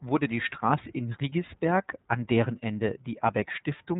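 From start to finish the speech runs through the iLBC codec, and you can plainly hear it. Everything stops around 3.9 kHz, so it's dull and boxy, and since each 30 ms frame is coded independently, the voice comes out rough and slightly synthetic, consistent with the 13.33 kbps mode.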